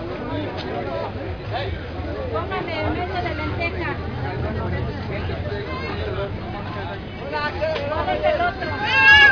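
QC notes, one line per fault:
Nothing stood out on listening to this recording of everyday sounds.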